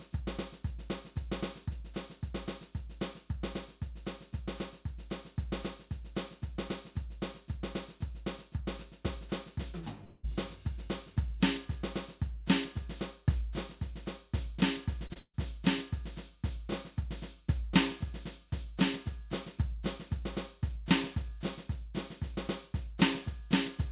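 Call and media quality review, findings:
Long network dropout, 10.04–10.25 s: the music smears into a held, fading continuation for about 0.2 s, then resumes further on. The likely cause is a jitter-buffer underrun. Unlike a burst, nothing drops to silence.

Short concealed packet loss, 15.07–15.11 s and 15.13–15.17 s: two brief smeared wobbles where 20 ms gaps were patched by extrapolation and blended back. Shorter and cleaner than the burst that follows.

Burst of packet loss, 15.19–15.35 s: 140 ms of audio gone. Concealment sustains the last sound, then decays into about 60 ms of silence before the music returns past the gap. Audible as a dip, not just a smear.

All of this sits on a call path with nothing above 4 kHz, consistent with G.711 mu-law at 64 kbps.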